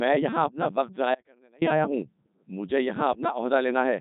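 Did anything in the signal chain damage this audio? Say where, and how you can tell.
Yes. The codec stage did this. Throughout, the speech sounds robotic and buzzy, and nothing is present above 3.8 kHz. That fits the Codec 2 vocoder at 3.2 kbit/s. It sends only pitch, voicing, energy and envelope, and rebuilds speech from sine waves, so the damage is heavy.

At 1.15 s the speech cuts off abruptly and returns at 1.62 s. That is an audio dropout to a faint residue, lasting about 470 ms. The gap holds faint sound about 30 dB down, so the path after the break stayed live. A transmission or buffer interruption is the likely cause.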